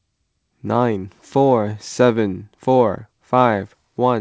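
Nothing's actually wrong with this bit of speech; it came through a wideband call path, which is why there's nothing above about 8 kHz, exactly what you'd expect from a G.722-style codec.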